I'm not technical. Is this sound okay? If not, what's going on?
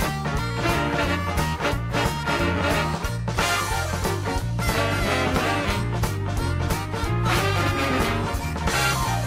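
No. From about 5.79 seconds to the end, there is a call bitrate drop. The connection's estimate of available bandwidth fell, so the call software squeezed the audio into far less data. To save space, it describes the sound more crudely and throws away the crisp top end. The sound turns rougher, watery and duller, and stays at its worst for roughly the last two and a half seconds without recovering before the clip ends.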